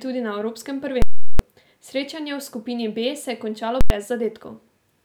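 At 1.02 s and 3.81 s, invalid numbers at full scale pin the waveform flat at one extreme value for 0.37 s and 0.09 s, which fits 16384- and 4096-sample blocks. Each is a loud pop at onset and release with nothing between, showing as broadband vertical lines on a spectrogram.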